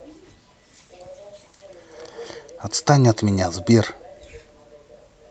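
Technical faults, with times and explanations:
0.65–2.41 s, call bitrate drop: the speech turns rough and watery for about 1.7 s, then clears. The call's bandwidth estimate fell, so the encoder was told to spend far fewer bits. The sound fits the Opus stream falling from 64 kbps to about 22 kbps. With fewer bits, each frame is coded more coarsely, and the detail of the speech smears. Quality returns once the bitrate recovers.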